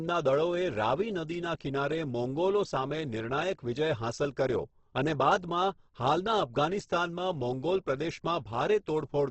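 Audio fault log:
throughout Opus compression: the speech is heavily damaged and likely passed through a low-rate Opus encoder; the grainy texture points to its CELT mode at a bitrate around 12 kbps. Nothing is heard above 8.2 kHz, so sibilants lose their top. Bands starved of bits are filled with folded or noise-like energy, making voiced sounds rough and granular. Unlike MP3, with its swirly, watery gaps, there are few spectral holes.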